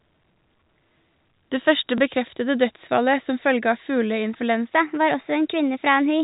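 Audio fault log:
1.98 s, packet loss with last packet repeated: a small blip just before "bekreftede dødsfallet som", where one 20 ms packet went missing and the previous one was replayed. The repeated chunk seldom lines up with the pitch cycle.
4.70–6.24 s, section at the wrong speed: the final stretch turns higher and hurried, running 1.2 times too fast and raising pitch by about three semitones, likely from that portion being played back against the wrong clock.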